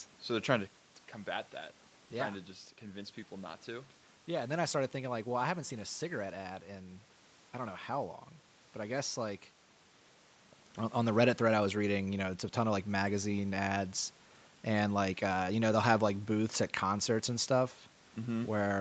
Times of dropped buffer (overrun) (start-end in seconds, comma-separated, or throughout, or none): none